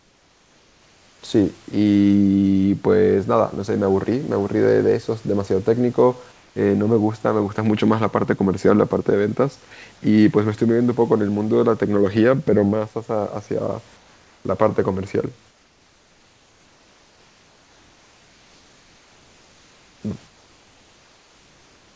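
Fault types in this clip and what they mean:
Comfort noise in place of the background: in the pauses, the room's textured background gives way to a flat, steady hiss about 2 to 4 dB quieter, likely synthetic fill from discontinuous transmission. Unlike gating, the gaps never fall silent; the background just loses its detail.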